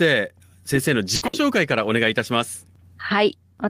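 At 1.15 s the speech hits a burst of packet loss lasting until 1.24 s. A second burst follows at 1.27 s and runs to 1.36 s. Each time, several packets failed to arrive in time. The receiver stretched the last sound it had for about 60 ms, fading it down. Voiced sound turns into a brief held buzz, and other sounds into a dying hiss. Speech then resumes with about 60 ms skipped.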